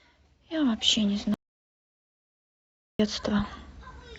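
The signal feeding the recorder was likely interrupted, through a disconnected device, a broken link or an accidental mute, while recording carried on writing silence. In this speech clip the result is an audio dropout to silence from 1.34 s to 3.00 s: the speech cuts off abruptly mid-flow and resumes just as suddenly, leaving a gap of about 1.65 s of total silence with no room tone. Whatever was spoken during that stretch is lost.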